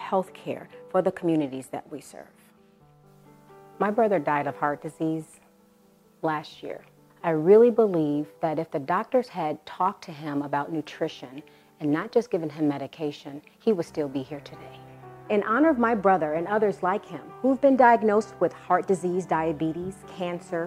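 No technical fault can be heard anywhere in this audio, with no interruptions, distortion or level problems at any point.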